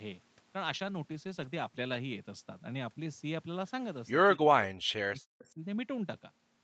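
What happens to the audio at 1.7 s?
At 1.7 s the speech is inside a call bitrate drop lasting from 0.69 to 2.07 s. The encoder was starved of bits, consistent with a fall from 32 to 15 kbps, so Opus codes coarsely and the speech sounds rough and watery. A spectrogram shows smeared, blotchy harmonics, with fine detail lost.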